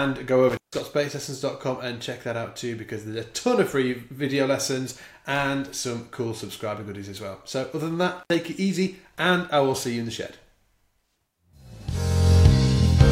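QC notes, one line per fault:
0.49–0.80 s and 8.19–8.35 s, intermittent contact: a loose connection opens for about 154 ms, then 69 ms. The sound drops to faint hiss, with crackle at each edge. The waveform shows collapsed gaps, and the spectrogram shows broadband vertical click streaks bracketing the gaps.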